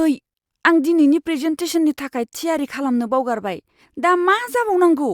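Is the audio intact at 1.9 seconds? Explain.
Yes, the audio is intact at 1.9 seconds, with no fault at that moment.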